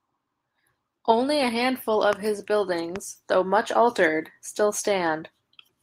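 At 2.13 s, just after "a handful", and again at 2.96 s, just before "though much altered still", a loud pop cuts in, likely a voltage step from a plug, switch or static discharge. Each is a single sharp thump standing well above the speech, which continues unbroken beneath it.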